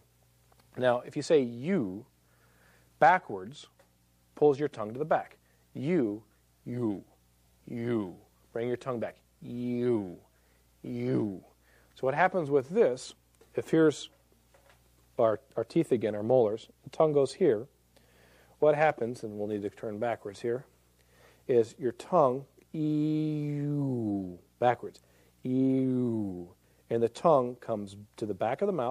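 Nothing in the audio stood out as a technical problem on listening.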